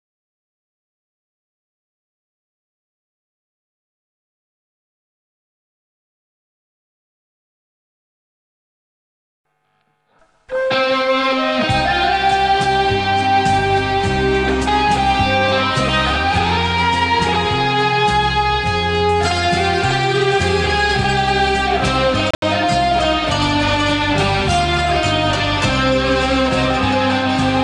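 A Bluetooth dropout breaks the audio from 22.31 to 22.42 s: about 102 ms of sound goes missing in gaps scattered over 116 ms, the longest lasting 73 ms, and playback resumes further along as though it had continued. This is likely several wireless packets arriving too late at the headphones and being discarded.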